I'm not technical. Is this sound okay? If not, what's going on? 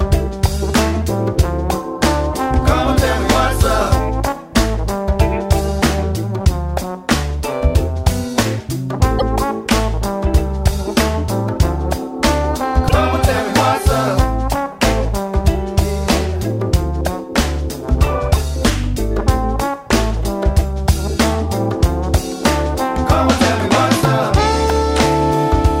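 No. There are two brief stutters from repeated frames, at 9.18 s and 12.88 s: a 48 ms slice of sound, about two compressed frames, plays twice, adding a tiny hiccup each time.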